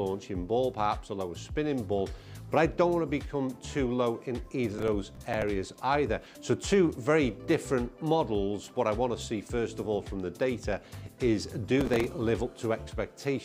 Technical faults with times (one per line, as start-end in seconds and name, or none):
4.78-5.48 processor overload crackle
11.81-12.04 processor overload crackle